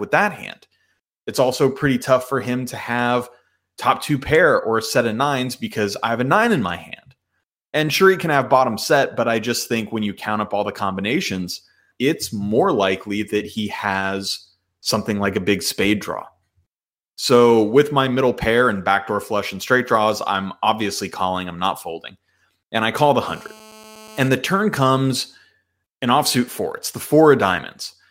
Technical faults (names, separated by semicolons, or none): GSM phone buzz